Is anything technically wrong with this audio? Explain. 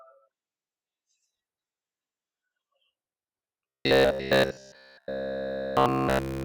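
Yes. From 3.69 s to 6.44 s the speech turns into robotic sound from repeated short buffers. The voice becomes a rigid, metallic buzz fixed at about 66.8 Hz. It still roughly tracks the words. The likely cause is audio arriving too rarely, so the playback side loops the last chunk it holds. A 66.8 Hz buzz fits a repeated chunk of about 15 ms. Nearly the whole stretch is repeats, and the real audio is skipped.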